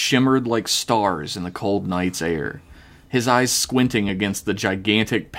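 From 4.09 to 5.09 s, periodic USB or driver dropouts skip about a millisecond every 0.249 s. Roughly five regular ticks result.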